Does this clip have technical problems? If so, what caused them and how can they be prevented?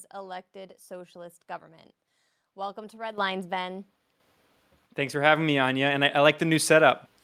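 Yes. The microphone volume is stepped up twice, at 3.18 s by about 10 dB and at 4.2 s by about 7 dB. Each time the call software judged the input too quiet and raised the device's input volume in a single step, so voice and background noise jump up together. On a waveform the envelope widens abruptly at each point, and a spectrogram shows the whole band, noise floor included, brightening at once. Turning off automatic microphone level adjustment in the call software and setting the input level manually beforehand prevents this.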